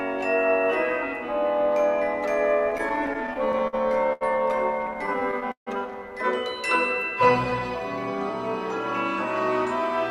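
Repeated stalls (stutter) run from 2.59 to 3.75 s and again from 4.87 to 5.69 s. Packets reached the receiver late or more slowly than they were played out, so the jitter buffer kept running dry, and each time the last sound was continued until data arrived. The first span has 13 such gaps totalling 175 ms, none longer than 53 ms, about 15% of that stretch. The second has 8 gaps totalling 217 ms, the longest 151 ms, roughly 27% of the span. Nothing is lost, but the audio drags and stutters. A short stall from a late packet sits at 4.13 to 4.23 s. One packet was not there when due, the buffer emptied, and the preceding sound was held for 80 ms until it arrived. Playback then resumed from the same point, so no audio is skipped, though everything after it runs 80 ms later than before.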